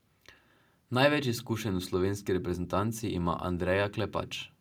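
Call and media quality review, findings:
Findings: none, no faults heard in the speech audio.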